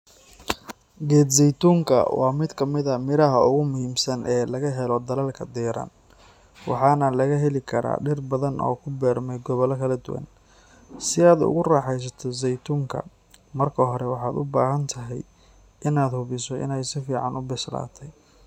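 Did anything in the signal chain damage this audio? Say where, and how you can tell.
No, nothing in the signal chain audibly damages this speech recording. No stage leaves any mark that can be heard on the sound.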